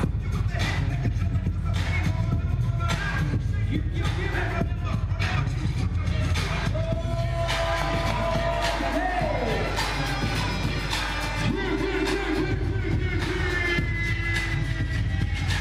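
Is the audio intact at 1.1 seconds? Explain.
No. Mains hum runs through the whole clip, including 1.1 s: the 50 Hz power line leaks into the signal, giving a steady low tone only slightly below the program level.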